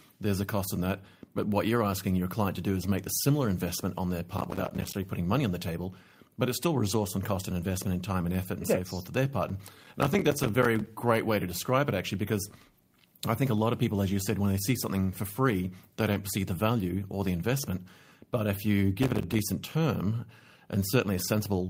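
A speech recording with two kinds of transmission and playback fault. Three times the processor falls behind its audio deadlines, causing processor overload crackle at 4.38 to 4.95 s, 9.49 to 10.87 s and 18.99 to 19.39 s. During each of these stretches, buffers that are not ready in time drop out to silence. The many tiny hard-edged gaps, fitting buffers of roughly 5 ms, come one after another and merge into a gritty, tearing crackle over the speech that stops as soon as the load eases. Separately, network packets go missing and are each rebuilt from the low-bitrate copy carried in the following packet, a lost packet rebuilt from error correction. This happens at 6.89 s, 8.39 to 8.45 s (two packets, 40 ms), 11.11 s, 16.11 to 16.13 s and 17.75 to 17.77 s, the single-packet repairs each about 20 ms. Because the copies fill the holes there is no gap, but those brief moments sound rougher and noisier than the speech around them.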